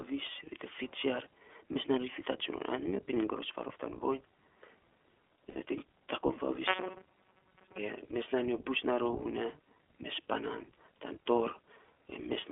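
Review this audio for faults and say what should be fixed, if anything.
The whole clip goes through the iLBC codec, squeezed into a 300 Hz to 3.4 kHz phone band and sounding a bit rough and synthetic, which fits the 15.2 kbps mode with 20 ms frames. Send it over a wideband codec like Opus instead.

At 5.50 to 5.57 s there's lost iLBC frames: about 60 ms turns into a held, buzzy vowel as the decoder repeats the last pitch cycle, then snaps back. More jitter buffering or FEC would cover that gap.

From 6.67 to 7.79 s the sound becomes a rigid metallic buzz at 188 Hz, likely robotic sound from repeated short buffers, with most of the audio looped instead of played fresh. Give the audio thread steadier scheduling or a larger buffer so new data arrives on time.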